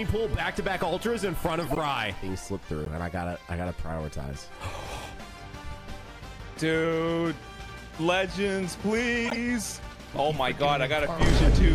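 A corrupt frame decoded appears three times, at 1.62–1.78 s, 2.85–2.87 s and 9.25–9.37 s: damaged compressed frames were played as-is, spraying energy into wrong frequencies as chirps, squeaks, blips or bursts of noise peaking near about -15 to -20 dBFS, visible as sharp-edged blocky smears on a spectrogram.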